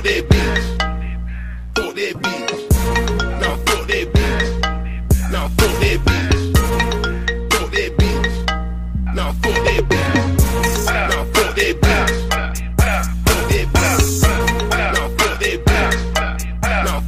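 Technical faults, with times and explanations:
0.00 to 11.96 s, mains buzz: a steady, raspy buzz sits well under the sound, roughly 35 dB down, then stops. Switching spikes arrive twice per 50 Hz mains cycle through a dimmer, rectifier or unshielded path, spreading harmonics up into several kHz.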